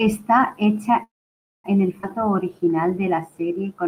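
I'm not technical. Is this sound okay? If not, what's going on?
No. Between 1.03 and 1.66 s there is a call audio freeze: the speech stops for about 0.6 s, mostly silence, likely because data arrived late, then resumes where it left off.

At 2.02 s there is a skip ahead: roughly a third of a second of speech is dropped, and playback jumps forward with almost no gap.

From 2.19 to 3.84 s a jitter buffer slow-down plays the speech at about 90% speed without changing pitch. The system is stretching sounds to rebuild its reserve, adding 0.17 s.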